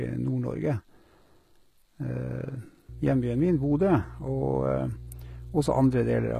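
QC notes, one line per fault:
Throughout: HE-AAC compression, likely. The treble is bright but not quite real: sibilants come out gritty and a bit lispy, and there's a metallic edge up top. That's what you get when the lower spectrum is coded and the highs are rebuilt by copying lower bands upward under a coarse envelope, so the upper harmonics don't sit where they should. Damage is plainly audible, nothing's there above 14.9 kHz, and the overall quality points to a low bitrate, somewhere around 20 kbps.
2.89 to 6.39 s: mains hum. A steady 60 Hz drone with a few low harmonics comes in partway through and runs right to the end. It sits fairly loud under the speech, not far below it. A ground loop or a transformer nearby is coupling the power line straight into the signal path, which gives exactly this kind of constant low tone.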